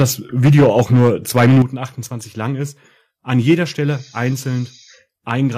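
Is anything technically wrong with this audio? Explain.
Yes. The speech distorts repeatedly, with two kinds of fault.

Microphone overload occurs at 0.00 to 0.02 s, 0.44 to 1.09 s, 1.37 to 1.62 s, and 3.49 to 3.53 s, just after "lang ist an". The loudest moments take on a harsh, crackling edge. The worst is at 1.37 to 1.62 s, where the signal runs about 8 dB past full scale and close to a third of the samples are flattened. The likely cause is an input level set too high, so the waveform's tops are sheared off at the converter's ceiling.

The microphone volume steps down at 0.02 s and again at 1.62 s. Each time, the voice and the background fall in level abruptly, by about 3 dB and then about 8 dB. Both drops follow directly on an overloaded stretch, which points to the call software likely reacting to the clipping by lowering the device's input gain in a single jump rather than a gradual fade.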